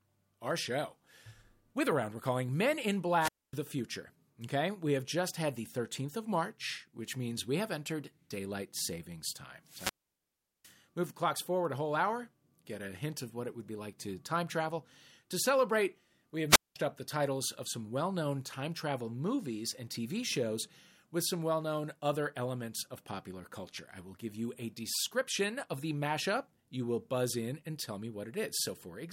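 Wireless microphone squelch dropouts occur at 3.19 to 3.53 s, 9.64 to 10.76 s and 16.49 to 16.76 s. Each time the analogue FM radio link weakens, hiss or static swells briefly, then the receiver's squelch cuts the output to near silence, for about 250 ms, 755 ms and 200 ms respectively, before the speech comes back. The middle gap is the longest and most disruptive.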